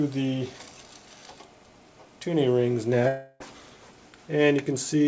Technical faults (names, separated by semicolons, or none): long network dropout